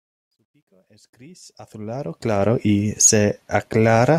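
A speech recording fades in from the start to about 2.51 s, but that fade shows truncation distortion: the quiet opening, worst from 0 to 1.14 s, sounds gritty. The coarse steps fit a 12-bit stage without dither, and on a waveform they look like blocky squared steps, with broadband grit on a spectrogram.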